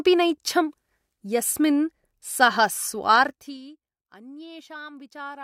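A speech clip with zipper noise from 3.14 to 3.6 s, where the level falls by roughly 20 dB in coarse 2 dB jumps at about thirty per second. Each jump clicks, so the waveform envelope shows a staircase and the spectrogram shows faint, regularly spaced vertical broadband lines.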